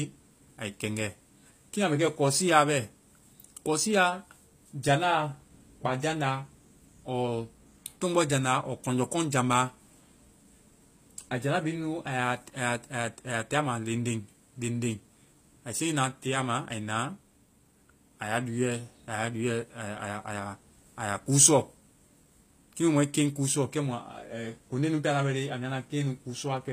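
Throughout the speech, s sounds come out gritty and metallic, and the top of the spectrum stops dead at 15.5 kHz. This is likely HE-AAC compression, rebuilding treble from copied lower bands rather than coding it; the damage points to a bitrate near 24 kbps.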